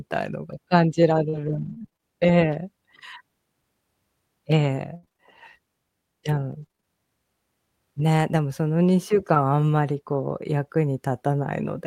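Speech here is hit by three kinds of network damage. The first is repeated packet loss (robotic sound), in bursts from 1.29 to 2.04 s, 4.96 to 5.20 s and 6.62 to 6.84 s. In each burst, audio data arrived late or not at all again and again, and the decoder patched every hole by extending the last sound. About 200 ms goes missing in the first burst, a quarter of that stretch, with holes up to 38 ms. The second loses 140 ms, more than half its span, with one hole of 63 ms. The third conceals about 45% of its span, with holes up to 32 ms. The result is choppy, robotic speech with pieces dropped out, worst around 5 s. The second kind is a lost packet rebuilt from error correction, at 7.98, 9.35 and 10.29 s. Each time a single 20 ms frame failed to arrive, and the decoder rebuilt it from a low-bitrate copy carried in the next packet, so no gap opens. Those 20 ms sound briefly rougher and noisier. 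The third kind is a short concealed packet loss at 9.34 to 9.37 s, overlapping the 9.35 s rebuild. About 20 ms never reached the decoder in time, and roughly 13 ms of it was filled by continuing the preceding sound before blending back. This leaves a brief smear or wobble at that point.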